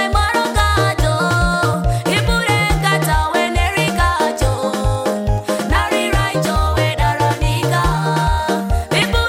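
Near the end, from 8.96 to 9.06 s, a burst of DAB burbling breaks through. For about a tenth of a second the sound breaks into short blips of noise. Weak reception let bit errors slip past the error correction, at a rate of roughly half a percent. Corrupted samples then put blips of noise into single sub-bands. The length of the burst fits about five damaged MP2 frames.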